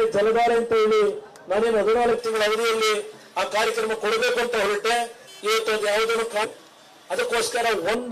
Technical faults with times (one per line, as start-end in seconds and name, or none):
2.18-7.95 pre-emphasis left on
6.43 damaged data in a compressed stream